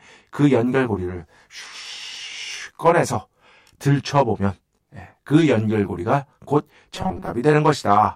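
From start to finish the speech carries channel delay comb filtering: one channel trails by about 20 ms, so mono summing carves regular notches from about 30 Hz upward, leaving a rough, slightly doubled tone. At 6.95 to 7.31 s the speech turns into robotic sound, a rigid metallic buzz at 188 Hz, likely from short buffers repeated to cover missing audio, with roughly two fifths being repeats.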